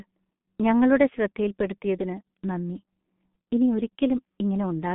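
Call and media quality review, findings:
G.723.1 codec, throughout the clip. Speech muffled and hoarse, consonants smeared; nothing above 3.8 kHz, line band roughly 150 Hz to 3.5 kHz. Heavy damage from coarse 30 ms frames and a slowly updated voice model, consistent with a bitrate near 6.3 kbit/s.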